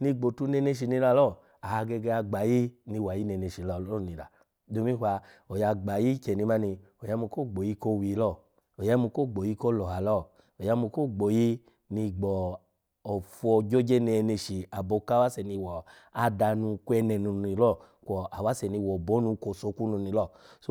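No technical faults are audible anywhere in this speech recording.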